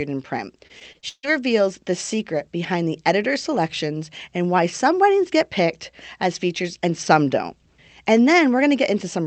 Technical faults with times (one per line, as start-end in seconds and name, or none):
0.67-1.25 repeated packet loss (robotic sound)